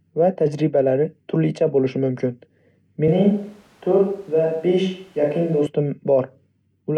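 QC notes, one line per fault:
3.08–5.66 s, switch to a distant microphone: speech abruptly turns roomy, hollow and thinner, at about the same level. Likely a far microphone replaced the close one. Faint room noise, then a sudden return.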